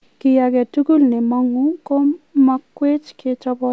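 Nothing's wrong with this bit of speech: it's come through a call path whose sound tops out around 8 kHz, about what you'd expect from a wideband codec like G.722, and there's nothing here to flag.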